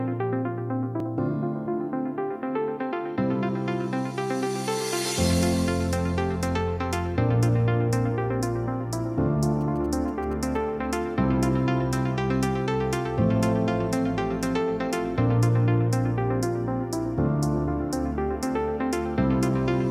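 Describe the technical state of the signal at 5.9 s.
At 5.9 s the signal runs intact, with no dropout, distortion, glitch or other technical fault at that moment.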